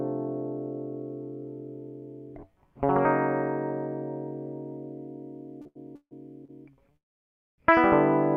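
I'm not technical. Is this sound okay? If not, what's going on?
No, not quite. From 5.61 to 6.51 s the music has repeated stalls (stutter): it catches four times, the longest for 156 ms, as the player stretches the last bit of sound while waiting for late data. Nothing gets lost, but the music drags.

Then, from 6.97 to 7.6 s, there's a call audio freeze. The music stops and goes almost silent for about 0.6 s, then picks up where it left off. The likely cause is data held up in transit, so the player ran out.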